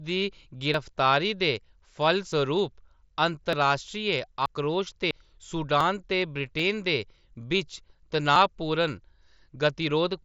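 Dropped buffers (overruns) hit this speech recording at 0.74, 2.32, 3.53, 4.46, 5.11, 5.81, 6.60 and 8.36 s. Each is the speech jumping forward with no gap. The likely cause is the capture software falling behind, so the hardware overwrote samples it had not yet collected. The skips lose around 50 ms, about 100 ms at 2.32 s and about 150 ms at 4.46 and 5.11 s. The audio also passes through a Bluetooth mSBC headset link, so nothing sits above about 8 kHz.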